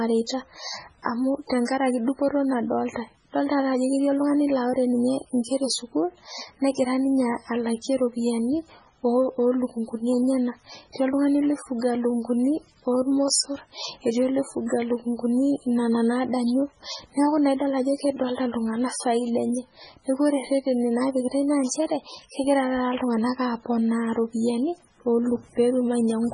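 All the way through, the speech sounds watery and swirly with nothing above 10.5 kHz, likely heavy MP3 compression at a starved bitrate, something like 16 kbps.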